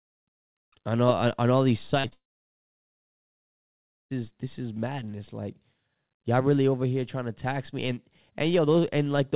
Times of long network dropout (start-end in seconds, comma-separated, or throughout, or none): 2.13-4.12